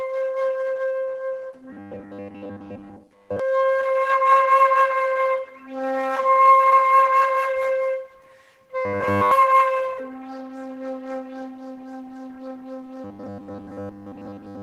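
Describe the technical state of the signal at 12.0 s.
At 12.0 s the signal is intact, with no audible fault in the sound at that moment.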